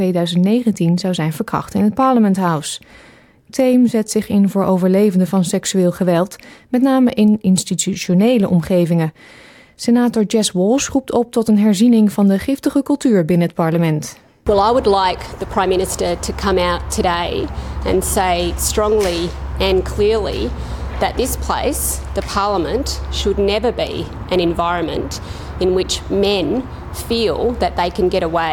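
No technical faults can be heard anywhere in the audio; the signal stays continuous and stable throughout.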